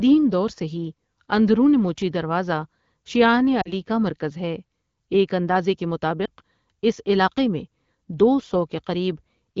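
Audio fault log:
3.61–3.72 s and 6.25–6.29 s, lost AMR speech frames: corrupted radio frames forced the AMR-WB decoder to conceal. It replayed the last good pitch and vocal tract settings at falling gain. The result is a brief smeared warble, longer at 3.61 s, which fits two missing 20 ms frames, against one at 6.25 s.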